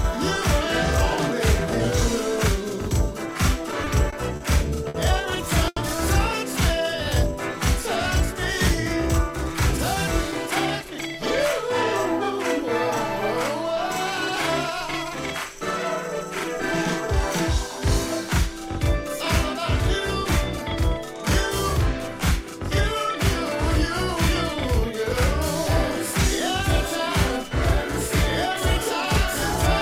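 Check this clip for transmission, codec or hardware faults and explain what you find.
Four faults are audible: a channel delay running the whole length, then three jitter buffer problems between 3.71 s and 14.78 s.

Channel delay (doubling), throughout: one channel arrives 42.67 ms behind the other, which fits a 2048-sample buffer at 48 kHz. Summed to mono, the late copy sits at equal level just behind the original, giving a constant doubled, slap-like edge to every onset.

Repeated stalls (stutter), 3.71 s to 5.78 s: the jitter buffer ran dry six times, and each time the receiver extended the last sound until packets caught up, about 230 ms in all, the longest hold 80 ms. Nothing is lost, but the passage drags and stutters.

Jitter buffer slow-down, 6.77 s to 7.33 s: with the buffer running low, the receiver repeated short pitch periods to rebuild its reserve, adding 59 ms. Playback drops to 91% speed at unchanged pitch, so sounds stretch out.

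Jitter buffer speed-up, 9.28 s to 14.78 s: holding more audio than its target, the receiver trimmed short pitch-period slices repeatedly, removing roughly 150 ms overall. Playback runs at 102% speed with pitch kept across those five and a half seconds.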